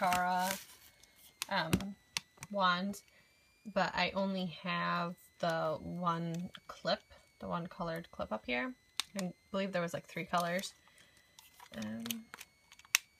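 Throughout, a switching supply whistle sits around 2 kHz, wandering between 1.96 and 2.42 kHz, about 35 dB below the sound, as a nearby power supply cycles audibly.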